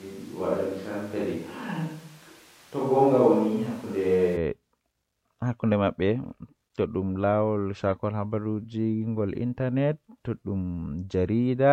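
Until 4.35 s, the speech sounds roomy, hollow and thin, with faint room noise. Then it turns abruptly close. This is likely a switch to a distant microphone.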